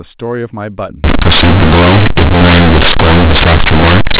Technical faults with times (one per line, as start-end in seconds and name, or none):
1.04-4.19 companded audio read as linear